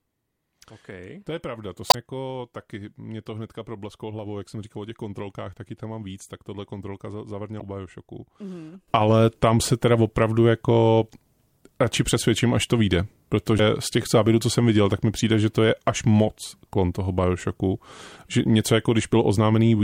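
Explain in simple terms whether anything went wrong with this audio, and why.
Three short bursts of damaged data in a compressed stream appear in this speech recording, at 1.87 to 1.95 s, 7.57 to 7.62 s and 13.56 to 13.60 s. Each lasts well under a tenth of a second and comes through as a brief chirp or blip. Part of the stored or transmitted audio was corrupted there, so the decoder could not rebuild those moments properly and had to skip forward to the next readable section before playback resumed.

A sudden gain jump happens at 8.88 s: the loudness steps up sharply and stays raised until the clip ends. The speech and the background hiss get louder together, all at once, with no gradual fade. That points to a digital volume setting that was most likely changed instantly rather than ramped smoothly, so the recording switches from one level to a much higher one in a single step.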